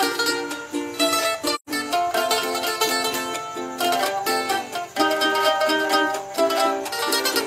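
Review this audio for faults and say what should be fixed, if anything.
AAC frame loss with muting occurs from 1.55 to 1.69 s. The sound fades out, leaves a soft-edged gap of about 128 ms, then fades back in. That length fits roughly three lost frames, each decoded as silence. The overlapping windows smooth both edges. To prevent it, protect the stream with retransmission or forward error correction, or enable decoder concealment that fills lost frames instead of muting them.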